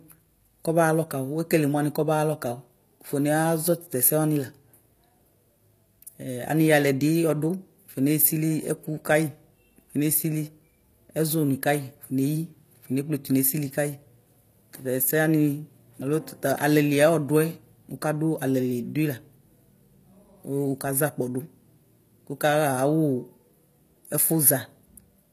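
Throughout the speech, the treble sounds synthetic and nothing reaches above 15 kHz. S sounds come out gritty or metallic. The damage is plainly audible. The cause is likely HE-AAC compression, which rebuilds the top end from copied lower bands. That fits a bitrate near 24 kbps.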